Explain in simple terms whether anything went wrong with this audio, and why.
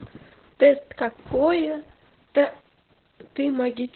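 Something did go wrong. The whole clip suffers from Opus voice compression. The speech was squeezed hard to save data. Nothing above about 4.2 kHz survives, so it sounds muffled, like an old phone line. Rough coding also makes it hoarse and slightly robotic throughout.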